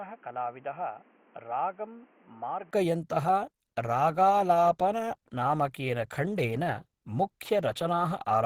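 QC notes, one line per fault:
0.00–2.73 s, input switched to a poorer device: the sound is dull and boxy, with nothing above 3.2 kHz, new background noise sitting about 30 dB under the signal, and a level roughly 10 dB lower. At 2.73 s a brief gap of about 20 ms is followed by full bandwidth returning. This is likely a capture path that began on a narrower-band microphone or headset call profile, with its own noise and gain, before switching back.
3.07–8.46 s, adaptive stream at a lower bitrate: without any gap, the quality suddenly drops, with coding artefacts rising and persisting to the end. The abrupt change, with no dropout, suggests the player moved to a lower-quality version of the same stream when throughput fell. The character fits a step from Opus at around 64 kbit/s down to about 16 kbit/s.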